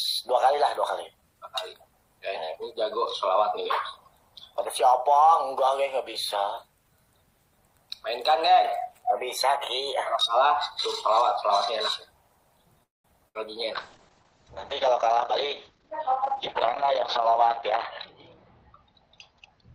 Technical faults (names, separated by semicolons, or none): call audio freeze; burst of packet loss; call bitrate drop; jitter buffer speed-up